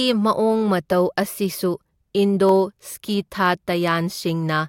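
At 2.49 s a single sharp click cuts into the speech, showing as a thin vertical line through the spectrum. The likely cause is dropped samples: a tiny fraction of a millisecond of the stream went missing, so the waveform leapt straight to a later value. Unlike a dropout, no stretch of sound goes silent or disappears. The loss is far too brief to hear as a gap, leaving only the one click.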